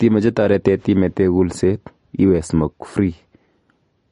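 The clip is speech with plainly audible MP3 compression damage from start to finish. Nothing is present above 10.6 kHz. S sounds turn swirly and watery, and attacks smear. This points to likely MP3 encoding at a low bitrate, which fits around 40 kbps.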